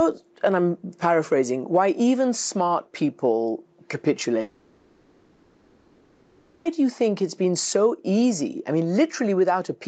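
From 4.41 s to 6.67 s the sound stops and is replaced by a synthetic continuation. For about 2.2 s the last sound carries on as a buzzy, hissy smear that fades, never true silence. This is likely a long network dropout, with the receiver's concealment filling the whole gap. On a spectrogram, already capped near 8 kHz by the call path, the harmonics blur and decay. The waveform shows a shrinking envelope before the audio resumes abruptly at 6.67 s, with the missing stretch simply gone.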